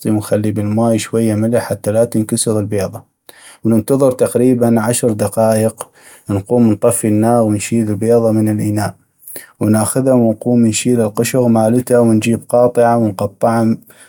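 No technical faults can be heard anywhere in this recording.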